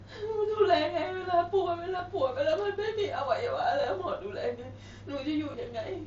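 Concealed Bluetooth headset packet loss occurs at 1.98 s, 3.81 to 3.84 s and 5.52 to 5.54 s. Headset packets were dropped, and the phone patched each 15 to 22.5 ms gap by repeating a matching slice of the preceding waveform, heard as a brief buzzy blip.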